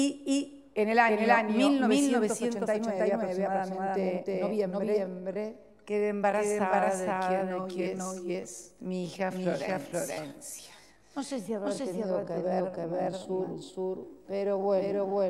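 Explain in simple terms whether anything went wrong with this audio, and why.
A doubled audio track runs throughout: a second copy, about as loud, trails roughly a third of a second behind, likely from the sound being captured twice out of step.

A time-stretched section runs from 4.8 s to the end: the audio suddenly slows to about two-thirds pace while the pitch stays the same, so it drags. Software likely stretched it to fill a longer length.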